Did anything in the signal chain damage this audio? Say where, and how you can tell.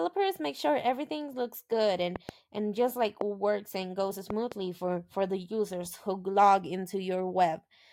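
Yes. Loud pops in the analogue wiring stage sit on top of the speech: close pairs at 2.16–2.31 s and 4.30–4.54 s, and a single sharper pop at 3.21–3.23 s, peaking about 10 to 15 dB above it. Because the speech continues underneath, this is not a dropout. An added voltage step, likely from a plug, switch or static, was shaped into a pulse.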